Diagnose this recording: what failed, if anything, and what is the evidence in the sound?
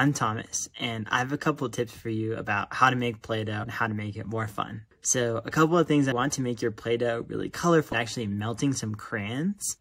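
Three brief glitches interrupt the audio, at 3.62 to 3.64 s, at 6.11 s, and at 7.92 to 7.94 s, each lasting only about 12 to 20 ms. The failure is in the codec stage: damaged data in a compressed stream. Corrupted or missing bytes left frames the decoder could not read correctly, so it produced garbage briefly, lost sync, and resumed at the next valid frame header.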